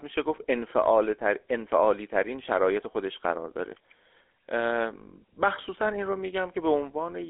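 Throughout the recording, the speech has passed through the GSM full-rate codec. It rebuilds the voice from a vocal-tract model excited by a sparse, regularly spaced pulse train, with the rate consistent with a 13 kbps coder. The line band is held to roughly 300 Hz to 3.5 kHz, with nothing above 3.7 kHz, so the sound is thin and muffled, and the coarse excitation gives it a plainly audible buzzy, gravelly roughness.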